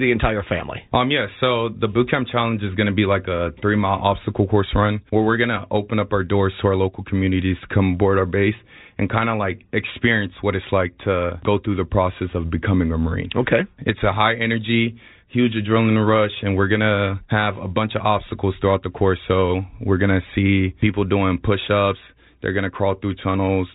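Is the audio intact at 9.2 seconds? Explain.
Yes, the audio is intact at 9.2 seconds, with the speech carried cleanly through its G.711 telephone coding and nothing breaking up or dropping out at that moment.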